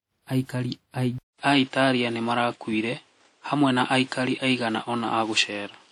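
It's a speech clip, and the whole thing carries plainly audible coding damage with a smeared, washy quality and hiss that rises and falls with the speech. That's most likely WMA compression: a transform codec spreading quantisation noise over long blocks, and the sound fits a low bitrate, something around 48 kbps. The spectrum stops near 19.9 kHz. At 1.18 s the input switched to a poorer device. There's a gap of about 200 ms, and from there to the end the band stops at about 10 kHz, so the top is gone. The level shifts by roughly 5 dB, and a new noise floor appears roughly 35 dB under the speech. That pattern points to the system likely moving to another microphone or a headset's call profile partway through.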